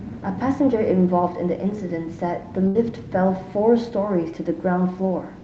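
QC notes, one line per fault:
2.67–2.78 s, burst of packet loss: several packets in a row failed to arrive in time, so about 80 ms of speech never reached the receiver. Concealment stretched the last received sound for about 72 ms, lowering its level as the gap went on. This gives a brief held, fading continuation before playback resumes further into the speech, with the stretch in between missing. The call codec's band limit near 8 kHz is present on either side.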